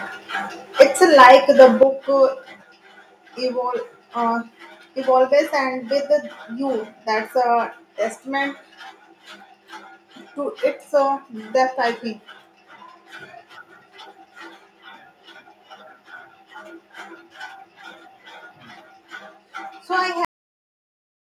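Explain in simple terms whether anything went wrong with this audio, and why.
Three problems can be heard.

Harsh crackling hits the loudest moments at 0.80 to 0.83 seconds and again from 1.19 to 1.83 seconds. This is microphone overload, likely from input volume set too high.

During the first burst and right after the second, at 0.82 and 1.83 seconds, the level suddenly drops. This is microphone volume stepped down, likely software turning the input down after the distortion.

At 20.25 seconds the sound stops mid-sound and falls into dead silence. This is a cut-off end. The final part was never saved.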